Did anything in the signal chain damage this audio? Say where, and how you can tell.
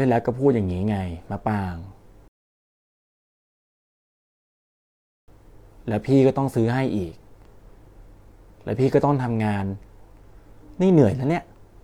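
Yes. At 2.28 s the speech cuts to silence and resumes at 5.28 s exactly where it stopped, with nothing missing but 3 s added. That is a rebuffering stall at playback: the player exhausted its downloaded audio and waited for more to arrive.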